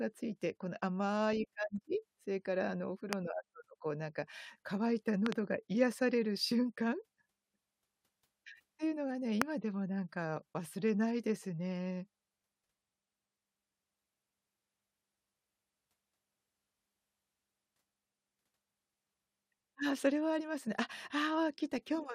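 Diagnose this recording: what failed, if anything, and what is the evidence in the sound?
Loud pop at 3.13 to 3.15 s, a double pop at 5.26 to 5.34 s, and a stronger pop at 9.42 to 9.44 s, each about 20 to 25 dB above the speech, which carries on underneath. This is likely an analogue wiring fault: a voltage step from a loose plug or static added to the signal.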